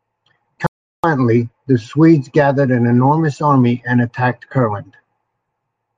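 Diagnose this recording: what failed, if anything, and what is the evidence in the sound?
Audio dropout to silence at 0.67–1.04 s: the speech falls to silence, with a flat waveform, a blank spectrogram and no room tone, likely from a lost input link.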